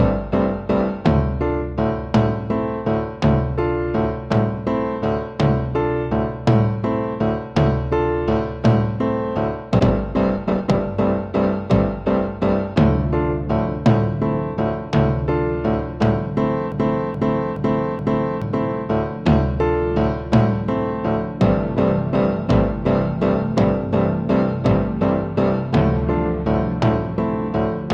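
At 9.8 s the audio shows a skip ahead. Roughly a second of material is simply absent, and the sound on either side of the jump is butted together with no gap or fill. That is what happens when a stretch of audio is discarded, either lost in transit or dropped by an overfull jitter buffer, while later audio was already queued and ready to play. Straight after it, from 9.87 to 12.75 s, comes a jitter buffer speed-up. The sound runs at 110 % of normal speed at unchanged pitch, so it sounds hurried. The receiver is trimming many short pitch-period-sized pieces in succession to drain excess buffered delay, removing around a third of a second in total over that span. From 16.72 to 18.42 s there is a broken-record loop. A 426 ms fragment plays four times back to back, identical each pass, and whatever audio belonged in that interval never plays. The likely cause is a stall in the player, encoder or stream, which kept resending the last fragment it had buffered instead of new material.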